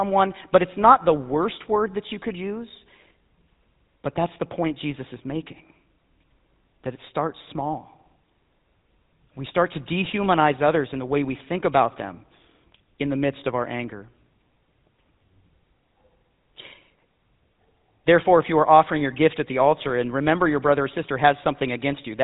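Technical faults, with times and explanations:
Throughout, GSM full-rate codec: the speech runs through the early GSM coder, which models the vocal tract and drives it with a sparse pulse excitation, which fits a 13 kbps stream. Nothing survives above 3.8 kHz, leaving it dull, with a plainly audible buzzy, gravelly roughness.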